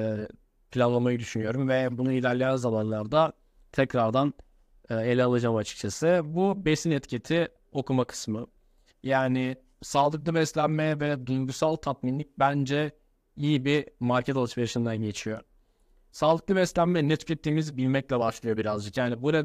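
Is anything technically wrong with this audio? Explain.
Yes. From 3.92 to 8.33 s, just after "ve bunu ilerleyen zamanlarda", the speech carries a crude rate conversion. The pattern fits a 48 kHz to 44.1 kHz change done by straight linear interpolation between samples, with no filtering. That leaves a periodic error that turns into shifted, inharmonic copies of the speech. It sounds like a faint, gritty fizz well below the speech level, tracking the louder and brighter syllables. Steady hiss wouldn't track the speech, and plain aliasing wouldn't have this fixed repeating pattern.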